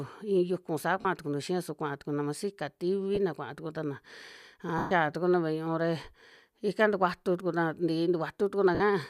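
Lost LE Audio frames at 1.01–1.06 s, 3.15–3.17 s, 4.78–4.91 s and 8.75–8.81 s: the decoder repeats the last spectrum with scrambled phase, so the sound smears into noise and fades, unlike a hard dropout's silence.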